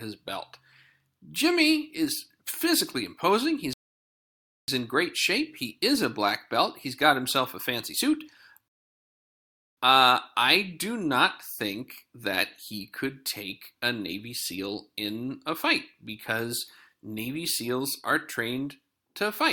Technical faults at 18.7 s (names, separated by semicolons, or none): none